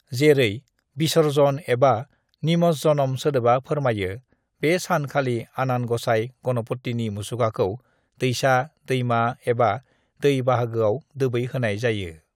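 No technical fault can be heard anywhere in this recording, so the recording is clean.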